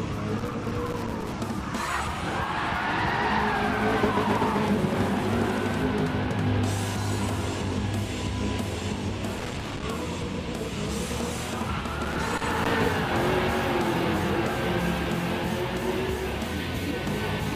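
A worn or dirty contact somewhere in the signal chain is making and breaking as it moves, producing loose connector crackle. Each time the contact opens and closes, the audio is chopped into fragments, heard as an irregular burst of crackle and scratching. This happens three times: from 0.38 to 1.33 s, from 9.39 to 9.84 s, and from 12.03 to 12.94 s. The first and last bursts each run close to a second, and the middle one about half as long.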